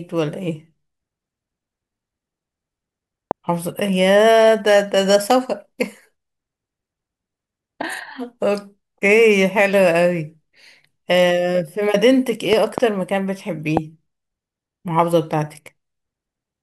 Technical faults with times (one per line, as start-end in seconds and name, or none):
3.31-3.33 loud pop
5.31-5.33 loud pop
12.53-12.80 loud pop
13.77-13.79 loud pop